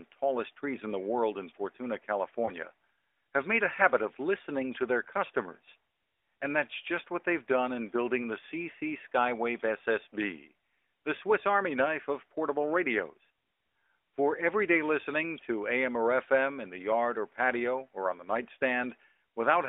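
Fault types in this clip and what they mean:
Lost AMR speech frames: radio errors made a frame fail its checksum, so the decoder repeated the last good pitch and vocal tract settings at lowered gain. Here this gives one brief dip or warble at 2.46 to 2.52 s, a gap that fits one 20 ms frame.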